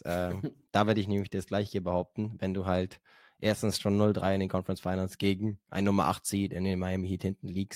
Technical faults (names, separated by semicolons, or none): none